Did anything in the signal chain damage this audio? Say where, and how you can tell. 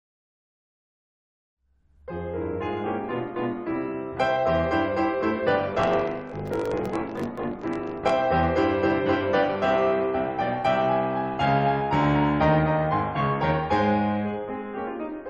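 Yes. Between about 5.74 and 8.10 s the music picks up a 50 Hz buzz and rushes ahead roughly 1.16 times faster while its timbre stays put, which is a block size mismatch (truncated) at the driver or buffer stage. One stage is writing longer blocks than the next reads, so the tail of each block gets chopped. Each cut lands at the block rate, giving the buzz, and the missing chunks speed things up. It fits a 1024-sample write block.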